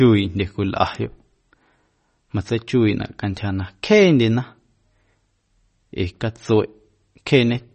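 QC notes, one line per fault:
Throughout, MP3 compression: the speech has a plainly watery, swirly edge and nothing at all above 8.3 kHz, so the s sounds come out dull and smeared. That's likely an encoder short on bits, which fits a low rate around 32 kbps, cutting the treble and flickering weak bands.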